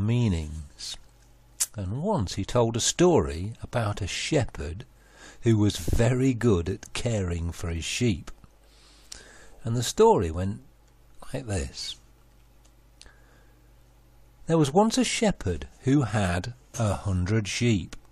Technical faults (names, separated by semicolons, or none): none